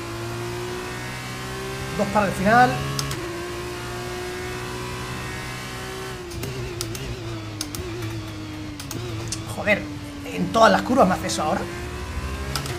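Nothing technically wrong turns up anywhere in this one, so there's no fault to point to at any moment in the audio.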